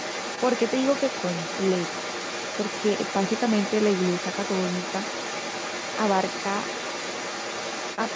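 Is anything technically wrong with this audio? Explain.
Yes. From 0 to 8.16 s, the other side's voice leaks through: a second, quieter voice sits roughly 10 dB under the main speech, likely loudspeaker playback that the echo canceller failed to remove from the microphone, giving an overlapping talker throughout the speech.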